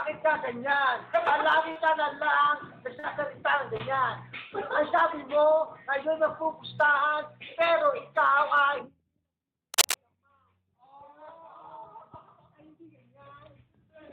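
At 1.71, 2.99 and 3.77 s there's short concealed packet loss, gaps of about 40, 40 and 20 ms that the decoder papered over, leaving brief smears. Then from 9.73 to 9.94 s comes cable scratch noise, a rough rustle about as loud as the sound itself, likely a worn connector being moved.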